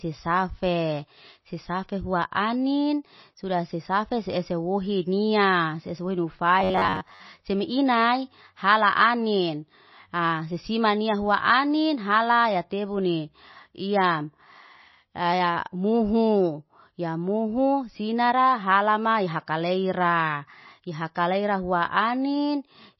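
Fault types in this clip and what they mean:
MP3 compression: The encoder likely ran short of bits, which fits a very low rate near 24 kbps. It discarded the treble outright and dropped weak frequency lines that flicker on and off between frames. Throughout the speech this gives a dull, band-limited tone with a plainly audible watery, swirling texture, metallic chirps on the s sounds, and smeared consonant attacks.
Robotic sound from repeated short buffers: From 6.60 to 7.21 s, fresh audio arrived too seldom, so the playback likely kept looping its most recent short buffer, about 10.7 ms long, while about half of the real audio was skipped. Each loop restarts at a fixed interval, stamping a steady 93.8 Hz buzz onto the speech. For that stretch the speech turns into a rigid, metallic drone that only loosely follows the original.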